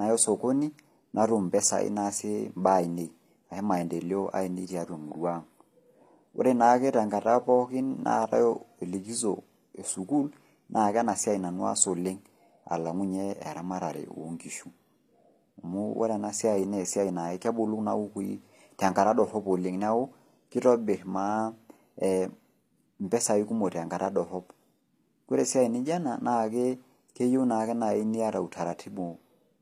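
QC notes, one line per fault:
throughout, HE-AAC compression: the speech keeps its treble, but the s sounds come out gritty and lispy because the upper band is rebuilt from copied lower bands rather than cut off, which likely points to HE-AAC at a low bitrate, around 24 kbps.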